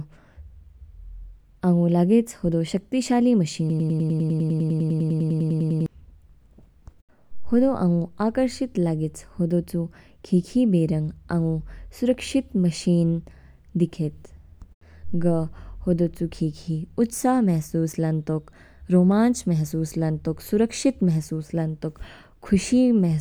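From 3.70 to 5.86 s the speech locks into a broken-record loop, one 100 ms fragment repeating identically 22 times, likely a stalled stream resending its last buffer. Unlike an echo, nothing decays, and the speech that belonged there never returns.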